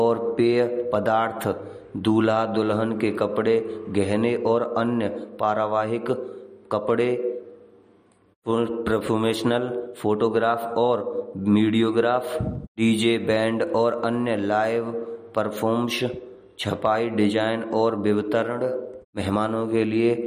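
Throughout, likely MP3 compression, at what sounds like 48 kbps, starves the speech of bits, cutting everything above 15.2 kHz and leaving audible watery smearing.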